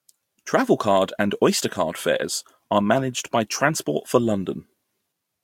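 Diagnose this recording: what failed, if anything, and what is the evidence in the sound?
Nothing failed in this recording.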